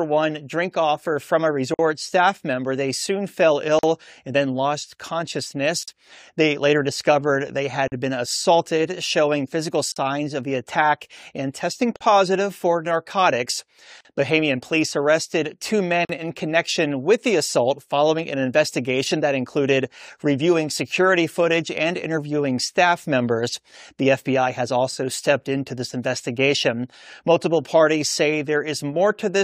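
Starting at 1.74 s there's a gap at a join of encoded pieces, then another every 2 seconds: 3.79, 5.83, 7.88, 9.92, 11.96, 14.01 and 16.05 s. The first is about 49 ms and the rest about 43 ms. Each sounds like the speech briefly drops out with softened edges, then carries on right where it stopped. It's what you get when 2-second chunks are encoded separately and butted together without trimming the encoder's lead-in delay and end padding.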